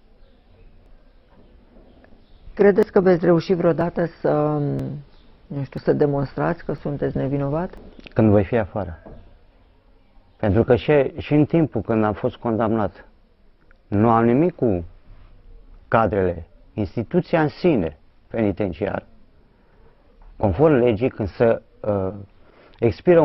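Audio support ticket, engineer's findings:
Overlap between stream segments: tiny skips at 0.86, 1.84, 2.83, 3.81, 4.79, 5.78, 6.78–6.80, 7.77 s. The rhythm matches 1 s segment boundaries. The player trims overlapping timestamps, discarding roughly 6–20 ms of real audio. The waveform jumps with no inserted silence, unlike a dropout gap.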